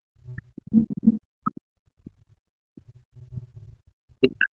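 A speech clip. From 0.11 s to the end, the speech dips, loses its top end or breaks into pieces, at worst around 40 dB down. This is speech suppressed in double talk, likely from an echo canceller muting the talker during far-end speech. The call microphone processing shows its band limit, with nothing above 8 kHz.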